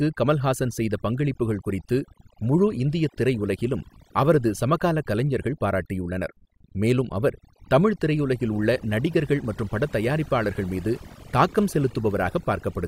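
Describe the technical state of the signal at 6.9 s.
At 6.9 s the gaps around the speech drop and break up into twinkling specks. This is overdone noise removal, present across the whole clip rather than just this moment. A noise reduction stage was pushed too hard: any frequency band sitting close to its estimate of the background gets cut deeply or shut off, so the softer parts of the voice are stripped away along with the noise.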